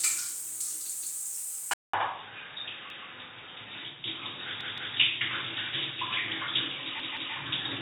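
At 1.02 s there's a repeated buffer: the device didn't get fresh audio in time, so it played the last chunk again. You hear a 171 ms slice twice, with a hard seam at the repeat. That length fits an 8192-sample buffer. Then at 1.74 s there's a 200 ms gap, and from there to the end everything above 3.8 kHz is gone. The sound goes dull and boxy, with a faint new hiss well under the signal, though the loudness stays about the same. That's likely the input switching to a poorer device, such as another mic or a headset call profile. The repeated buffer comes back at 2.90 s as a single extra play, and at 4.61 s and 7.00 s the same 171 ms slice plays three times in a row, so those two stutter longer. Nothing gets skipped at any of them; the audio just stalls and then picks up where it left off.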